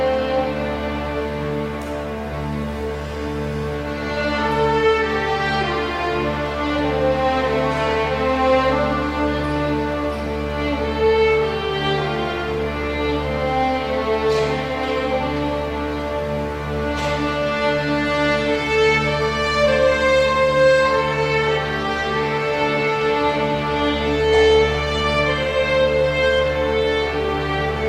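No technical faults can be heard anywhere in the recording, and the signal holds steady throughout.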